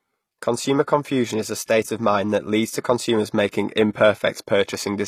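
Throughout, s sounds are gritty and lispy, likely HE-AAC compression near 24 kbps rebuilding treble. A spectrogram shows blocky, copied bands above a sharp crossover.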